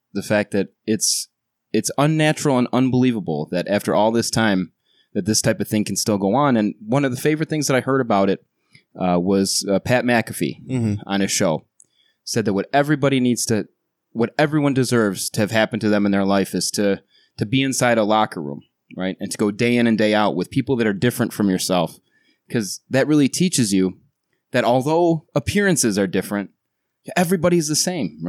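Speech, with nothing technically wrong with it.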